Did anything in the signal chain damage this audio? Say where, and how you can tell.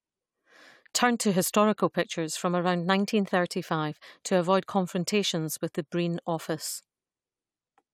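No, nothing damaged this audio.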